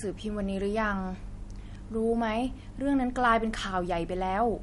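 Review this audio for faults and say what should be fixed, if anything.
The whole clip has a hard ceiling at about 11.2 kHz, with nothing above it, and a watery, swirly texture running through the speech. That points to MP3 compression, likely at a low bitrate around 48 kbps. When bits run short, the encoder chops the top end at a fixed frequency and drops quieter frequency detail, which flickers in and out between frames and leaves sibilants and onsets sounding smeared. To prevent it, keep a lossless master and encode at a higher bitrate.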